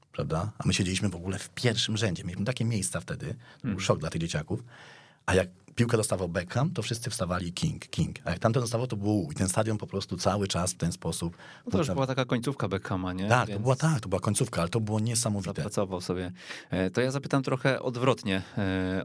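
No technical faults are audible.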